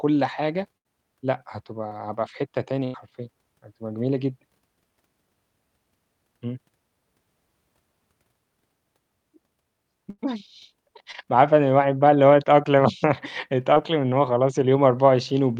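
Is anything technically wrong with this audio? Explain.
Yes, the speech has two kinds of network dropout. Burst of packet loss occurs at 0.77–0.87 s, 2.84–2.96 s and 10.10–10.20 s. Each time, 80 to 100 ms of signal never arrives. The receiver stretches and fades the last sound into a buzz or hiss, then jumps ahead. On a spectrogram this shows as smeared, decaying harmonics followed by a hard restart, and in the waveform as a fading envelope.

Short concealed packet loss occurs at 1.89–1.92 s, 11.12–11.16 s and 13.74–13.78 s. Each time about 20 ms is lost and patched by extrapolating the previous sound before it blends back. It is heard as a brief smear or wobble. It appears as a thin vertical blur on the spectrogram and a slightly flattened waveform stretch.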